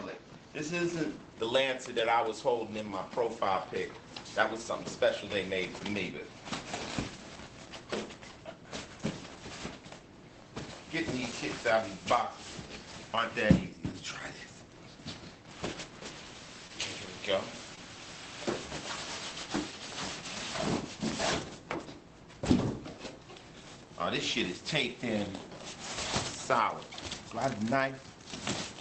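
Two brief smears break the sound, at 16.67–16.71 s and again at 17.75–17.79 s, each a short wobble. These are short concealed packet losses: roughly 20 ms of audio failed to reach the decoder in time, and the receiver filled each gap by extending the preceding sound before blending back into the real signal. The audio arrives through a WebRTC-style call path whose top end stops near 8 kHz, which fits Opus at a modest bitrate.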